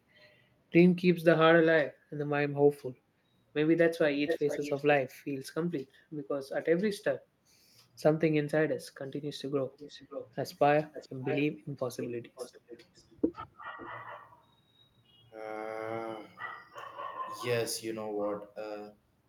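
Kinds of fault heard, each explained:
Echo leak: A distinct delayed copy of the sound returns, about 441 ms late early on and 545 ms later, ranging from nearly as loud as the original to barely audible, likely leaking past a loudspeaker-side echo canceller. Unlike reverberation, it is a separate repeat, not a smooth tail.
Speech suppressed in double talk: For roughly a tenth of a second near 13.7 s the speech dips by about 5 dB, likely because an echo canceller turned both its own talker and the loudspeaker echo down while both sides overlapped. Unlike a dropout, the speech stays audible, only pushed down, and an echo follows.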